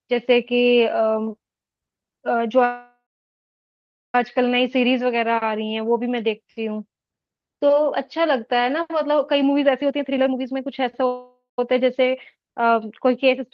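A call audio freeze runs from 2.64 to 4.15 s. The last sound stretches into a fading buzz and then about 1.1 s of silence, likely because delayed packets left the jitter buffer empty. The speech then resumes where it stopped, delayed by 1.5 s, with nothing lost.

A jitter buffer speed-up follows from 9.82 to 11.07 s. The receiver trims pitch-period slices repeatedly, removing roughly 0.4 s, so the speech plays at 128% speed with unchanged pitch and sounds hurried.

Right after, from 11.07 to 11.59 s, a second call audio freeze stretches the sound for 0.51 s, ending in a brief 0.14 s silence, before the speech picks up again intact.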